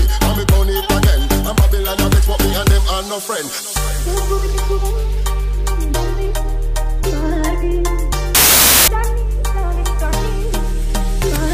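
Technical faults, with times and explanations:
8.35–8.88 s, wrong sample width: packed 24-bit samples are being read as 32-bit integers, so each value the player builds takes its bytes from two neighbouring samples. Only some of those values carry the top bits of the real signal, which leaves a burst of loud, harsh noise with the original sound faintly audible underneath. Because four bytes are consumed where three belong, the buried sound runs about 1.33 times fast and is raised in pitch to match.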